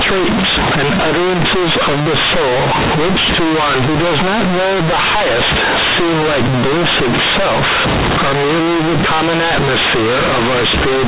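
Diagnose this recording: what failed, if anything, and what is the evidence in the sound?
Companded audio read as linear runs throughout the speech, a failure at the sample-format conversion stage. The mu-law telephone bytes reach playback as plain 8-bit linear samples with no expansion step. Each sign change throws the output across roughly half its range, so quiet passages come out as large as loud ones. The result is very loud, buzzy distortion over the whole clip, with heavy noise filling the pauses. Underneath, the narrow telephone band still shows, which fits 8 kHz G.711 coding.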